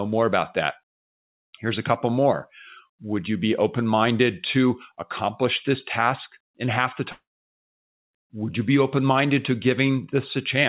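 Speech over what sounds like a G.711 call line, topped out at 4 kHz, and from 7.12 to 7.70 s there's a likely long network dropout. The last sound smears into a fading buzz, then about 0.45 s of silence, and roughly half a second of speech is simply gone when it resumes.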